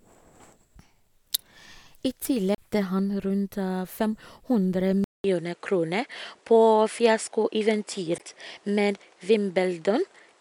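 At 2.55 to 2.58 s there is a CD skip. The laser has lost its track and landed on a different turn of the spiral, so the player mutes for about 30 ms and resumes from another point on the disc. It is heard as a small tick followed by an abrupt discontinuity, with the speech carrying on from a position that does not follow from what came before.

From 5.04 s to the end of the clip, the sound changes character in a way that most likely comes from the input being switched to a poorer device. The change opens with a gap of 200 ms. After it, nothing remains above 10.5 kHz, so the speech loses its air and sibilant detail and turns duller and boxier. A new background noise floor also appears, roughly 35 dB below the signal, while the overall level stays about the same.

A second CD skip occurs at 8.18 s, inside the degraded section. This one is shorter, with a mute of roughly 15 ms. It again produces a tick and a sudden jump to another position on the disc.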